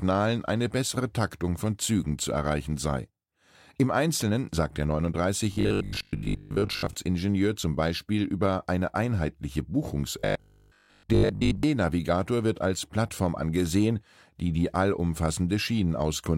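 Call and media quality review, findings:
Robotic sound from repeated short buffers at 5.53–6.95 s and 10.19–11.63 s: speech turns into a rigid 50 Hz buzz, likely a 20 ms chunk looping while most real audio gets skipped.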